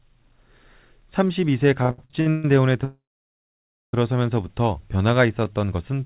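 From 1.83 to 2.45 s the speech breaks into repeated stalls, a stutter. Incoming packets arrived late, and the jitter buffer kept running dry. The receiver bridged each gap by extending the last sound. There are six such gaps, the longest about 140 ms. Together they fill about 390 ms, close to two thirds of that stretch. Nothing is lost. The speech simply drags and hiccups forward in jerks.

At 2.84 s a call audio freeze sets in and lasts until 3.94 s. The likely cause is packets held up in transit until the jitter buffer emptied. The last sound is carried on briefly and fades. Then about 940 ms of silence follows. The speech resumes exactly where it stopped. The result is an inserted pause of about 1.1 s, not a dropout of content.

From 5.27 to 5.59 s there is a jitter buffer slow-down. The buffer was rebuilding its reserve. It repeated single pitch periods or bits of pauses in a row, adding about 46 ms. 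The speech plays at about 88% speed but keeps its pitch. Sounds are stretched and slightly drawn out. Throughout, the narrowband call path leaves nothing above 4 kHz, as a 64 kbps G.711 link would.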